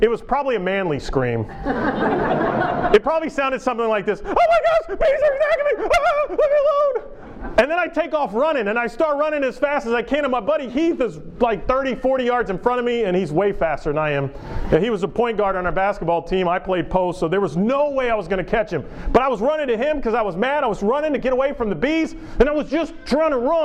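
On listening, nothing in the clip stood out as a technical problem.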